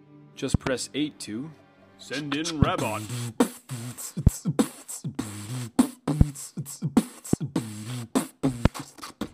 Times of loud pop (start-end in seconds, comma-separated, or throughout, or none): 0.54-0.69, 2.62-2.65, 4.27-4.29, 6.21-6.23, 7.33-7.36, 8.65-8.68